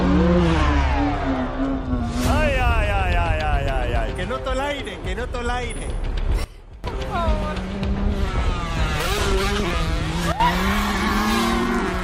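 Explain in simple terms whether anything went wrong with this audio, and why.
Two sudden gain jumps occur. At 6.44 s the sound drops sharply in volume until 6.84 s. At 10.32 s a smaller drop lasts until 10.4 s. Background hiss drops with it. The likely cause is a level setting switched instantly instead of smoothly.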